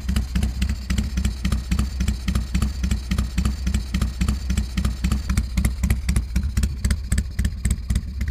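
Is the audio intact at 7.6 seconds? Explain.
Yes, at 7.6 seconds the audio plays through cleanly, with no dropout, click, distortion or other fault.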